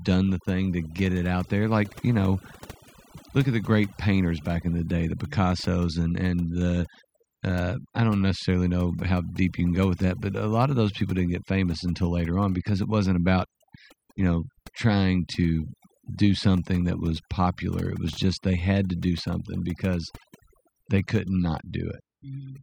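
Throughout the speech, overdone noise removal suppresses frequency bands near the estimated noise floor, leaving a lowered background that breaks up into twinkling specks.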